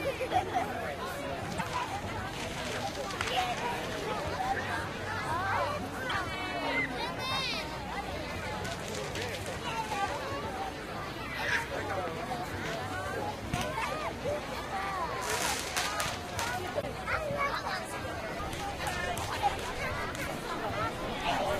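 Damaged data in a compressed stream disrupts the sound at 1.56, 6.08, 13.81 and 16.79 s, each lasting about 50 ms, as the decoder misreads frames and resynchronises at the next header.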